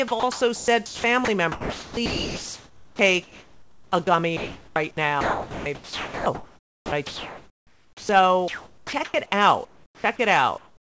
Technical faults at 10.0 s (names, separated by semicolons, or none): comfort noise in place of the background; onset clipped by the voice detector